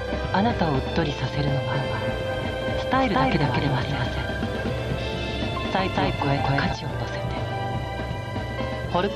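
From 1.75 s to 6.73 s the sound is heard twice. This is a doubled audio track: a second full-band copy trails about a fifth of a second behind, at roughly the same level. It has no decay or room colour. It cuts in and out abruptly, likely from a second, slower capture path.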